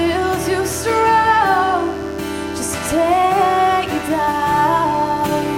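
From start to finish the clip carries a mains buzz built on 50 Hz, sitting roughly 25 dB below the wanted sound. Sharp switching spikes from a dimmer, rectifier or unshielded lead leak in twice per mains cycle, piling up harmonics of 50 Hz that climb well into the kilohertz range, so it comes across as a constant, raspy edge. A spectrogram shows evenly spaced horizontal lines at 50 Hz multiples across the whole clip, and the waveform shows a regular 100 Hz train of spikes.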